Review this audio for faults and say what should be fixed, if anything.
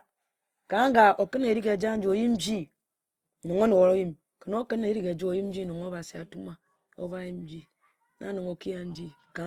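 Opus compression damage runs through the whole speech clip. The voice sounds rough and grainy, with a noisy texture on voiced sounds instead of clean harmonics. That fits Opus in its music mode at a low rate, around 24 kbps, where the encoder keeps each band's energy but fills bands it cannot afford with folded or noise-like content. The bandwidth still sounds full rather than narrowed. A spectrogram would show smeared, speckled harmonics and noisy upper bands rather than empty holes. To prevent it, encode at a higher Opus bitrate or keep the uncompressed original for review.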